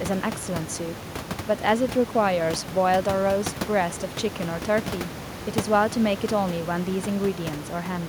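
Nothing in this speech goes wrong technically; the only extra sound is the room's own background noise sitting about 13 dB under the speech, which belongs to the recording rather than to any fault in the system.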